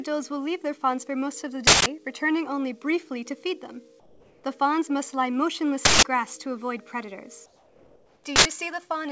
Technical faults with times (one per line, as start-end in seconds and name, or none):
1.67-1.86 uninitialised buffer
4.00-4.44 comfort noise in place of the background
5.85-6.04 uninitialised buffer
7.46-8.24 comfort noise in place of the background
8.36-8.45 uninitialised buffer